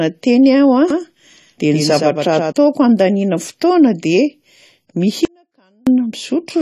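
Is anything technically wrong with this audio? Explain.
Yes, there are three problems worth flagging.

Throughout the clip the speech has a dull, smeared quality, and nothing survives above 14 kHz. That's most likely AAC compression at a low rate, something like AAC-LC at 32 kbps. At that rate the encoder quantises the spectrum coarsely against its hearing model and drops the top band altogether. The codec damage is plainly audible for the whole length, not just at moments.

From 0.90 s to 2.52 s, ending just before "handaniana fotoana", there's a doubled audio track. A second full-band copy of the speech runs roughly a tenth of a second behind and around 5 dB quieter. It has no reverb tail or room colour, and it switches in and out abruptly, which is likely a second capture path or a misaligned edit layered on top.

From 5.25 s to 5.87 s the speech drops out for about 0.62 s, leaving only faint sound roughly 40 dB below the normal level. 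The cut and the return are both abrupt, not a natural pause or fade. That's an audio dropout to a faint residue, likely the wanted signal being lost while the path after the break stayed live.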